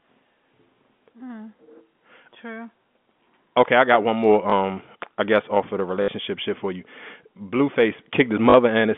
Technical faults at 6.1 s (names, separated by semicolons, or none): packet loss with last packet repeated